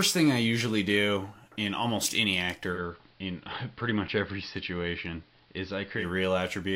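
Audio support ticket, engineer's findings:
2.71–6.06 s: digital radio blending to analogue. Hybrid receiver lost digital lock and cross-faded over about 104 ms to the AM simulcast, then back. Symptoms: level down about 2 dB, hiss around 35 dB below programme during the analogue stretch.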